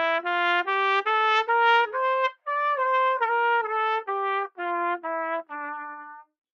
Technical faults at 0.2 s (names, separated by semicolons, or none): noise suppressor applied to music or sounds